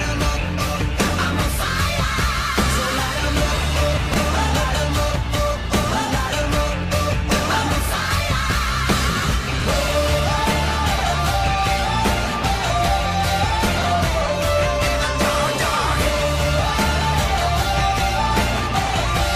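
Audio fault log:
4.12–4.16 s, 9.60–9.64 s, 13.78–13.84 s: chunks out of order. A 20 ms block lands one slot late (two at 13.78 s), so each spot jumbles briefly, with three hard joins.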